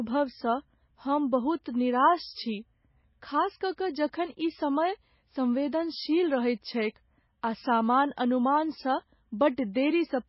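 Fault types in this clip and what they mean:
MP3 compression: The speech has nothing above 5.6 kHz throughout, and the remaining sound is heavily damaged, with a watery, swirling texture as weak frequency components drop in and out between frames, metallic chirps on s sounds, and smeared consonant onsets. The cause is likely an MP3 encode at a very low bitrate, around 17 kbps. A plain low-pass filter would only dull the top end, but this shows the unstable, bubbling artefacts of a starved encoder.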